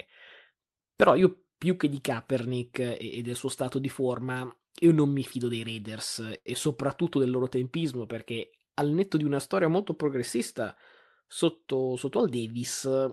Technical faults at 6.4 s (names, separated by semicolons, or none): short stall from a late packet